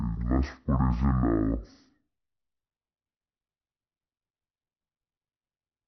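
From the first moment to the end, the speech shows a stereo-read-as-mono fault. The left and right samples, which alternate in the stream, have been taken as consecutive samples of one channel, so every stereo frame is spent as two mono samples. Playback runs at 0.5 times normal speed and the pitch sits 12 semitones down, a full octave. Above that, a fainter mirrored copy of the content sits in the upper half of the spectrum.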